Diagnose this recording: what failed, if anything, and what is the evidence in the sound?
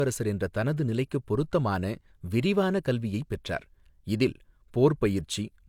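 Codec stage: the speech has nothing above 20.2 kHz throughout. This is low-bitrate audio saved at a high bitrate, likely HE-AAC near 48 kbit/s re-encoded as 192 kbit/s MP3, which cannot restore what the first pass removed.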